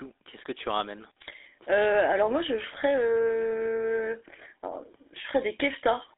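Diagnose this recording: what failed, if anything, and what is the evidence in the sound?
Throughout, the speech has a buzzy, gravelly roughness and is boxed into a narrow telephone band of roughly 300 Hz to 3.7 kHz, with nothing above 3.8 kHz. This is GSM full-rate codec damage at the codec stage, consistent with 13 kbps coding that rebuilds the voice from a coarse pulse excitation.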